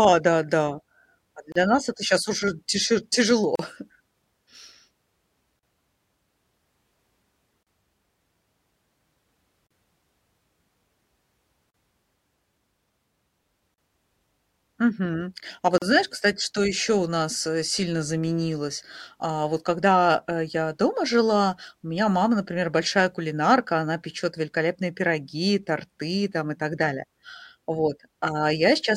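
At 1.52 s, after "да да а", a 33 ms gap at a join of encoded pieces drops out, recurring every 2 s at about 38 ms: 3.56, 5.59, 7.63, 9.67, 11.71, 13.74, 15.78 s. Untrimmed encoder delay and padding leave silent notches in the waveform and thin blank vertical stripes on the spectrogram.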